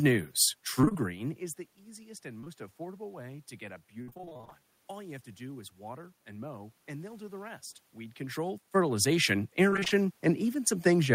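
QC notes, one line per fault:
0.81–0.97 s, 4.02–4.61 s and 9.70–10.06 s: repeated packet loss (robotic sound). Audio keeps dropping out in short bursts. Each hole is bridged by extending the previous sound, then the next hole arrives. About half of each stretch is patched. The patches give a choppy texture with pieces missing. The first ends just before "is the easiest and". The second follows "way to get a" and is longest, with gaps up to 58 ms. The third follows "rest weed control fertilization".
2.41 s and 2.44 s: short concealed packet loss. Two back-to-back 20 ms holes reached the decoder too late. The receiver continued the previous sound to cover each one, then blended back into the real signal. The result is a brief smear or wobble lasting about 70 ms in all. Any short consonant falling there may be lost.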